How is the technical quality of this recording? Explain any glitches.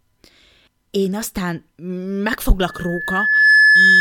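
The recording has one serious fault: loudspeaker feedback squeal near the end. From 2.67 s to the end of the clip, a steady tone at 1.7 kHz rises out of the speech. It swells in well under a second and ends up about 10 dB louder than the speech. The microphone is hearing the loudspeaker it drives. At 1.7 kHz the loop gain tops one, so that frequency keeps feeding itself and grows into a piercing, sustained whistle.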